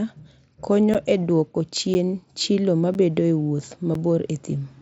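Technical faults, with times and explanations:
0.94 to 3.95 s, periodic USB or driver dropouts. Four brief gaps, about 10 ms each, fall once per second across this span. Each one cuts the speech and leaves silence in its place, so you hear a short, regular tick. The ticks sound only where speech is present. A background task seems to stall the audio driver or USB bus on a fixed schedule. Each time, the buffer due then never arrives and is lost. The mSBC headset path runs beneath this, with nothing above 7.7 kHz.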